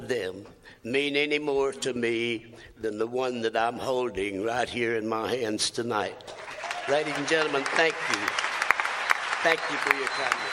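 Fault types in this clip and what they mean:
No technical faults can be heard anywhere in this audio. Nothing in it calls for a fault label or an explanation.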